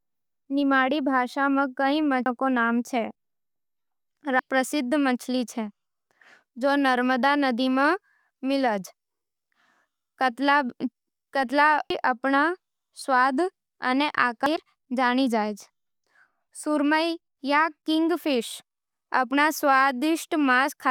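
Short glitches break into the speech at 2.26 s, between "निमाड़ी भाषा में कई" and "के नाम", at 4.39 s just before "प्रसिद्ध मछली है", and at 11.90 and 14.46 s. Each is damaged data in a compressed stream: corrupted bytes derail the decoder until it resyncs on the next frame header.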